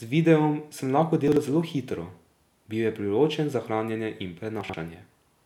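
Chunks out of order occur twice in this speech. At 1.28 to 1.37 s, one piece of audio about 43 ms long plays one slot later than it should. At 4.61 to 4.74 s, a piece of the same length plays two slots late. Because nothing is dropped, each moment sounds like a brief jumbled stutter rather than a gap. Each swap leaves hard joins at its boundaries. The equal piece lengths fit a block-based buffer being written in the wrong order.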